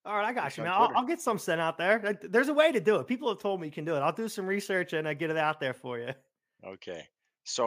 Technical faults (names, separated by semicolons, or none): none